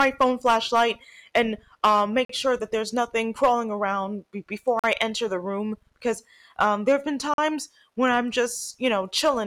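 A harsh, crackly edge sits on the louder syllables of this speech from start to finish. That is hard clipping: the level was pushed about 8 dB past what one stage in the chain could pass, so the peaks were sliced flat. Only a small fraction of samples, under one percent, hit the ceiling, so the damage is confined to the peaks rather than turning every sound to fuzz. The squared-off tops add high harmonics, which give that crackle.

Three abrupt holes interrupt the flow, each 44 ms long with hard edges. The first runs from 2.25 to 2.29 s, between "phone flashlight and um" and "sure that there's nothing". The second runs from 4.79 to 4.84 s, just before "I enter the room". The third runs from 7.34 to 7.38 s, between "um there have been" and "when I'm". These are gaps between chunks. They fall every 2.5 s, which points to audio handled in 2.5 s blocks with silence inserted at each join. The speech on either side is intact, but the flow is cut at every join.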